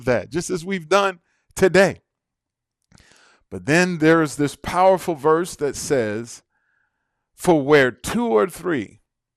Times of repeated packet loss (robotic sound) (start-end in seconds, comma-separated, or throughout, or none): none